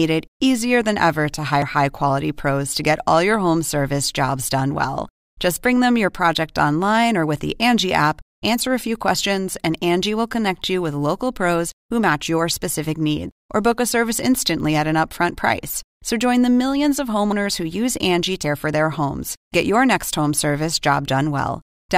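At 1.62 s, between "easier than ever to" and "high quality pros to", the speech jumps ahead. Same again at 13.31, 17.32 (after "join the millions of"), 18.43 and 19.54 s (between "for their homes" and "get your next home"). Each skip loses roughly a tenth to 0.15 of a second with no gap. That's likely a dropped buffer (overrun): the samples weren't read in time, got overwritten, and the ends were spliced.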